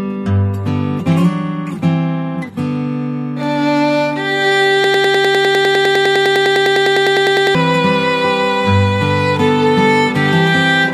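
From 4.84 s to 7.55 s a broken-record loop sets in: a fragment of about 0.1 s repeats identically 27 times, back to back, likely from a stalled player or stream resending its last buffer. Unlike an echo, nothing decays, and the missing audio never returns.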